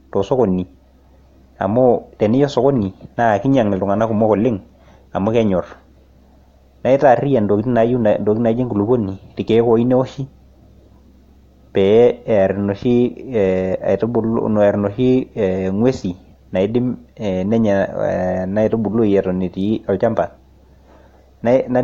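Speech, with no audible faults.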